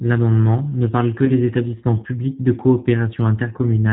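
From the start, the speech carries G.729 codec coloration: nothing above 4 kHz, and a slightly rough, synthetic texture from rebuilding each 10 ms frame with a few pulses at 8 kbit/s. That texture is what separates it from a plain band-limited telephone channel, which would sound dull but clean. Around 1.25 to 1.31 s comes VoIP packet loss concealed by the speech codec. About 20 ms of audio is missing, which fits a single lost packet. The decoder keeps extrapolating its last pitch and filter at falling gain, so the gap becomes a brief buzzy or noisy smear rather than silence. Recovery also lags by tens of milliseconds after the gap, unlike a simple dropout.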